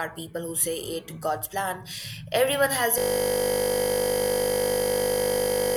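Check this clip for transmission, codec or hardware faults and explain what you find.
One hardware fault is present. At 2.98 s the audio locks into a system hang loop that runs to the end of the clip. The driver or machine stalled while the sound hardware kept replaying the same ring buffer. The repeated slice is 20 ms long, which fits a buffer of that duration. It cycles about 140 times. At a 50 Hz repeat rate the looping merges into a steady buzz instead of a stutter.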